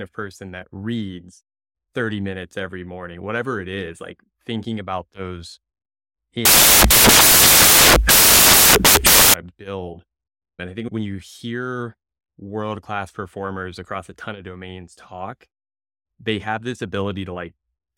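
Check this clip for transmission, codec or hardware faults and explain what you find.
One fault in this speech clip: samples built from the wrong bytes, 6.45 to 9.34 s, just before "to build". Misordered bytes promote noisy low bits, giving loud white noise.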